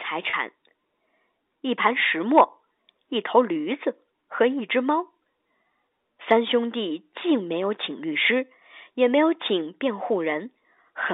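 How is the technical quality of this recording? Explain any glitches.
There's one glitch, right near the start, in what sounds like a telephone-band line (G.711 coding, nothing much above about 3.7 kHz). From 0.30 to 0.33 s there's a packet loss with pitch repetition. About 30 ms of audio went missing, which fits a single lost packet, and the receiver covered the gap by looping the last pitch period. So you hear a brief held, slightly buzzy tone before the sound picks back up.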